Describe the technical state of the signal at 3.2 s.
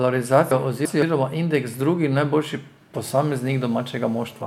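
At 3.2 s there is GSM phone buzz, running from 3.04 to 4.42 s: a steady, raspy 217 Hz buzz with harmonics, about 30 dB below the speech, from rectified handset transmit bursts during a call.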